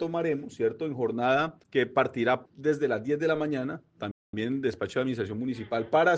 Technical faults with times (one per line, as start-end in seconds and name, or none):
4.11-4.33 playback stall